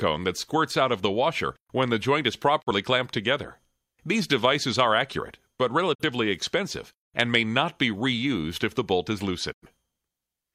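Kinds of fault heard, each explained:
Digital broadcast dropout: at 2.60–2.72 s, 5.93–6.04 s and 9.52–9.66 s the sound fades out over 20 ms and falls silent as the receiver mutes on missing or corrupt frames. The first two gaps fit one lost 43 ms frame, the last about two, and that audio never returns.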